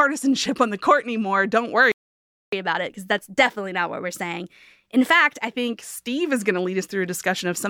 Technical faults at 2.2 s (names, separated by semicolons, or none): playback stall